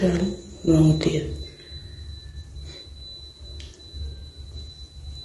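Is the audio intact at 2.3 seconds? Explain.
No. From 2.29 to 2.34 s there is a smeared, noisy patch: AAC frame loss with concealment, where the decoder rebuilt roughly 40 ms, about two frames, from the last good spectrum. Beneath it, the speech sounds rough and grainy, with a lowered or synthetic top band, likely from low-delay AAC compression at a low bitrate, around 32 kbps.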